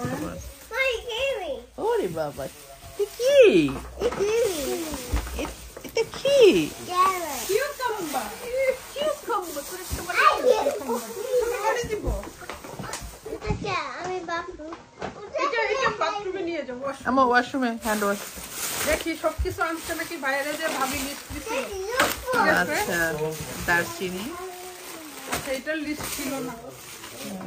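At 13.36 s the digital radio blends to analogue FM, cross-fading over about 111 ms until 16.89 s. Level drops about 1 dB, and faint hiss, roughly 40 dB down, appears. That hiss separates it from a bandwidth-cutting codec switch.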